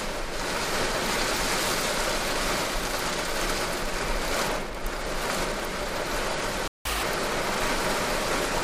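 The audio cuts out abruptly at 6.68 s and stays silent until 6.85 s, a gap of about 176 ms. This playback stall was likely caused by the player's buffer running dry or its output thread being blocked, leaving nothing to send to the output. On a waveform it appears as a flat line cutting into otherwise continuous material, and on a spectrogram as a clean vertical band of empty space across all frequencies with sharp edges on both sides. From 6.85 s to 7.03 s the player makes up for the gap with catch-up at higher speed: it resamples its backlog to run at double speed, so the sound is squeezed in time and jumps up by roughly ten semitones before snapping back to normal. On a spectrogram that short stretch shows every component shifted upward and its features compressed horizontally. On the waveform the cycles are visibly packed more tightly until 7.03 s.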